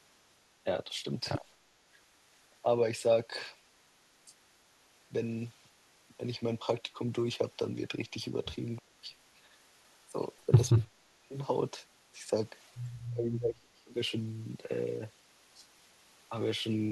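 From 0.64 to 1.05 s the speech dips slightly, a few decibels, for a small fraction of a second. This is likely speech suppressed in double talk. The echo canceller cannot tell the talker from loudspeaker echo while both sides speak, so it turns everything down.

From 1.55 to 2.34 s the background is gated by the echo canceller. The room sound drops by about 9 dB while the loudspeaker plays, then returns.

From 2.62 to 11.36 s the speech breaks up again, far worse. It drops in pieces, some deep enough to nearly vanish, about two seconds lost in total.

Inside that stretch, from 9.47 to 9.75 s, the background dips again by about 6 dB.

From 12.51 to 16.32 s the speech is clipped away once more, in deep cuts adding up to around a second.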